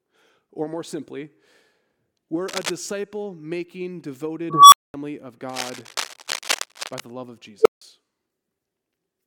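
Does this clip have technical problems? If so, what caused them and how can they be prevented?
Yes. Cable scratch noise appears from 2.48 to 2.71 s and from 5.49 to 7.01 s. A worn cable or connector being moved likely made its contact resistance fluctuate, adding dense, ragged scratching roughly as loud as the speech. Replace worn leads and secure connectors against movement.

An unstable filter occurs twice. A recursive filter with bad coefficients ran away: at 4.50 s a tone around 1 kHz swells over 0.22 s, clips, then drops to 0.22 s of silence. At 7.60 s a tone around 400 Hz builds in 51 ms before 160 ms of silence. Validate filter coefficients for stability before applying them.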